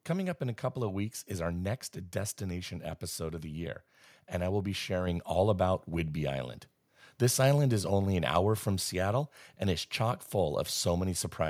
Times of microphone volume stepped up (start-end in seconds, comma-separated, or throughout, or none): 5.07